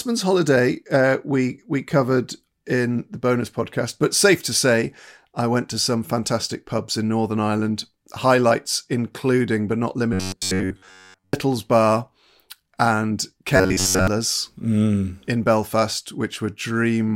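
A speech clip with two stretches of robotic sound from repeated short buffers, from 10.13 to 11.33 s and again from 13.56 to 14.08 s. In both, the voice turns into a stiff metallic buzz pitched at 93.8 Hz that only loosely tracks the words. That pitch points to a chunk of roughly 10.7 ms being looped, most likely because fresh audio wasn't arriving in time, so most of each stretch is replayed material while the real audio gets skipped.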